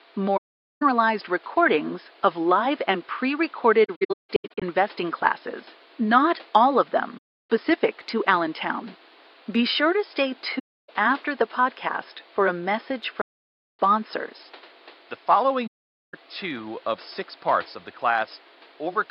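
Speech with six soft-edged dropouts from AAC frame loss with muting: 0.37–0.83 s, 3.85–4.63 s (scattered gaps, longest about 150 ms), 7.17–7.50 s after "classes not all of", 10.58–10.89 s before "after the podcast for", 13.21–13.79 s, and 15.67–16.14 s before "two of six parts". The decoder zeroed the lost frames' spectra, so the sound fades out and back in.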